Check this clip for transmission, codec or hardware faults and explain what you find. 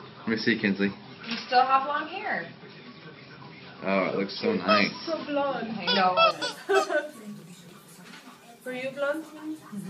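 One fault is present. From 0.0 to 6.31 s the audio is band-limited, with nothing above 5.5 kHz, a level about 5 dB different, and a noise floor around 30 dB below the signal. At 6.31 s it clears with no gap. This likely reflects an input switched to a poorer device whose narrower passband and own noise colour the sound dull and boxy.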